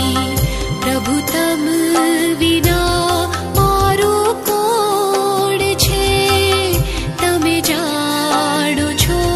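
Nothing goes wrong anywhere in the clip; there's no technical fault to point to at any moment.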